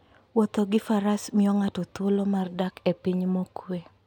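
Nothing in this recording stands out as a technical fault; the speech just runs along without any glitch, dropout or distortion to point to.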